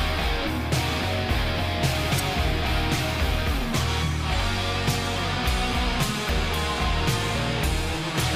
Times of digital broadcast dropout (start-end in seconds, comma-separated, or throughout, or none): none